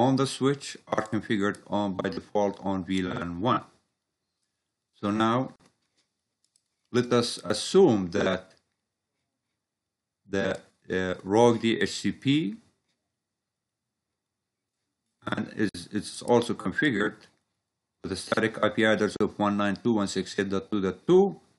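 The audio breaks three times with a gap at a join of encoded pieces. The gaps fall at 5.56 to 5.60 s (40 ms), 15.69 to 15.75 s (53 ms) and 19.17 to 19.21 s (39 ms). Each time, the sound resumes where it stopped. The cause is separate encoding of the pieces, joined without trimming. The encoder's start delay and last-frame padding both remain. Codec smearing softens the edges of each gap.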